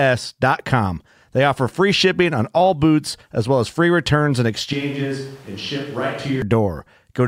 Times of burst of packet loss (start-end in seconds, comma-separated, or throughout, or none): none